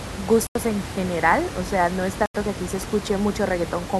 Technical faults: corrupt frame muted

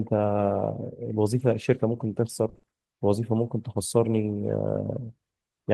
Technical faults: lost packet rebuilt from error correction; repeated packet loss (robotic sound)

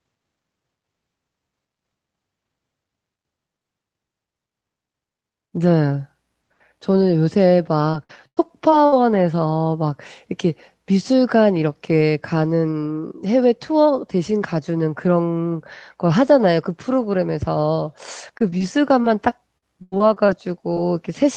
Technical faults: repeated packet loss (robotic sound)

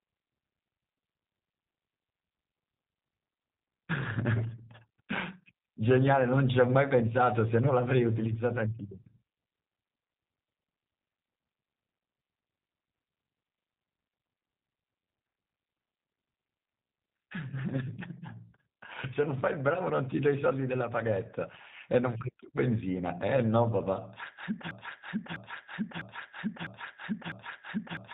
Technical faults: G.729 codec; broken-record loop

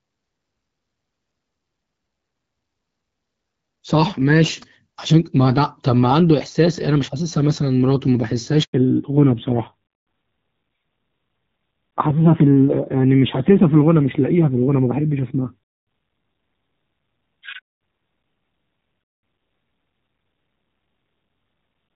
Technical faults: handover gap; fallback to narrowband

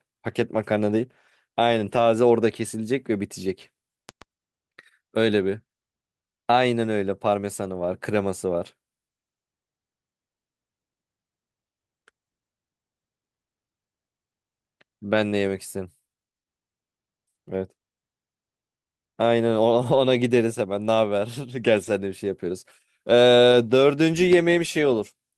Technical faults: lost packet rebuilt from error correction; loud pop

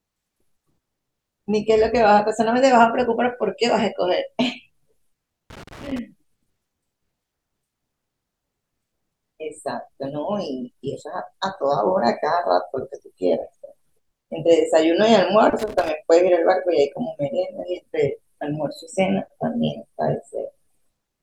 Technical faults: loose connector crackle

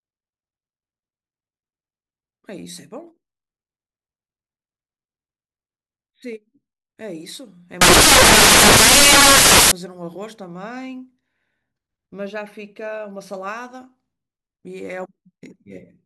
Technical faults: samples built from the wrong bytes

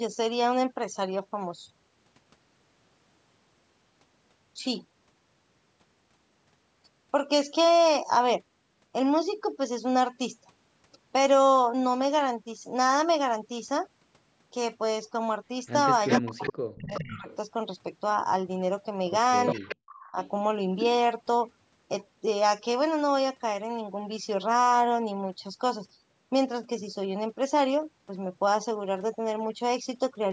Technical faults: echo leak; speech suppressed in double talk

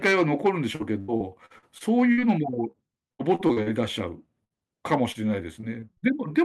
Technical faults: repeated packet loss (robotic sound); short concealed packet loss; burst of packet loss

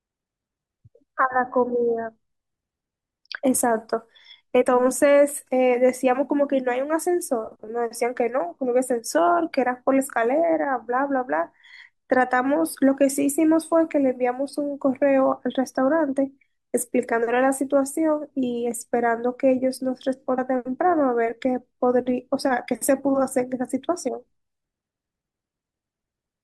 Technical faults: compressed frames skipped

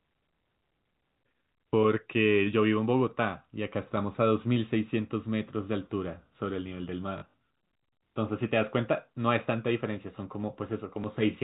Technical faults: packet loss with last packet repeated

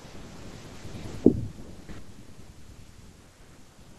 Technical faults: none

